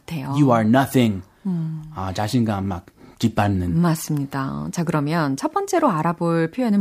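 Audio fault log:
No faults can be heard in this speech recording. There is nothing in it to enter in this log.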